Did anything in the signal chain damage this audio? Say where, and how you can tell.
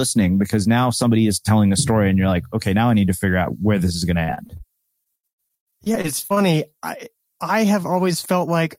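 Yes: repeated packet loss (robotic sound) at 4.23–4.61 s and 5.03–6.50 s, from the network. Missing packets were patched by extending the previous sound, leaving choppy speech with pieces missing.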